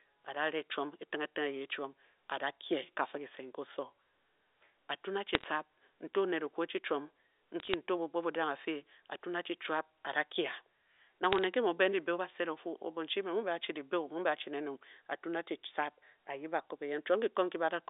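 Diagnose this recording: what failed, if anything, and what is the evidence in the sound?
Bit errors on the digital phone line caused bursts of sharp ticks over the speech at 5.35–5.44 s, 7.6–7.74 s and 11.24–11.44 s. Each flipped bit corrupts one G.711 sample. Sign or high-order bit hits jump the waveform far off, causing clicks at roughly a few tenths of a percent error rate.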